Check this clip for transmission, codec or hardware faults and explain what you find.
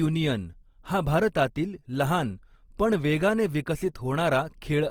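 One codec fault runs through the whole speech clip. Throughout, it sounds grainy and rough yet still reaches 20.4 kHz, likely from Opus compression, whose music mode fills bit-starved bands with noise, consistent with about 24 kbps.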